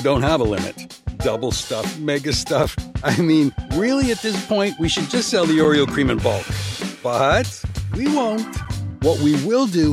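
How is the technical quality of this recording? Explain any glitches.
The recording has one recurring glitch: three tiny hard-edged dropouts at 2.63, 5.64 and 8.65 s. Each is a gap between chunks of about 7 ms, repeating every 3.0 s, where the audio was delivered in chunks with silence left at each join.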